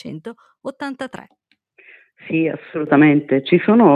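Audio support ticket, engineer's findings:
Sudden gain jump at 2.87 s, held to end of clip. Level steps up about 8 dB in one sample, no ramp. Background noise rises with the signal, so the change is gain, not source. Likely cause: digital gain setting or bit shift applied instantly in the capture or processing chain. Check for unsmoothed gain updates or AGC writes landing mid-buffer.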